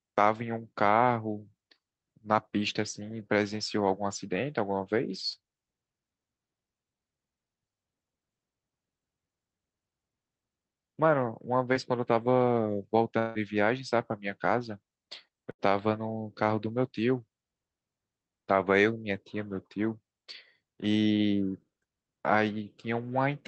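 Short concealed packet loss at 11.73 to 11.77 s: about 20 ms of the speech failed to reach the decoder in time, and the receiver patched roughly 15 ms of it by extending the preceding sound before blending back into the real signal. The repair is heard as a brief smear or wobble in the speech, sitting against the call codec's band-limited sound, which tops out near 8 kHz.

Long network dropout at 13.19 to 13.37 s: the speech turns into a held buzz or hiss for about 160 ms and then picks up again further along, with that stretch never played. No silence is left in the gap, because the continuation fills nearly the whole 160 ms. This is most likely a network stall during which no packets arrived, leaving the receiver to keep synthesising from the last sound it had.

Burst of packet loss at 15.51 to 15.61 s: about 80 ms of consecutive audio was lost or arrived too late to play. The receiver stretched the last sound across roughly 79 ms, fading it as the gap went on, so a voiced sound becomes a sustained buzz and other sounds a dying hiss. 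The speech then resumes with that short piece missing.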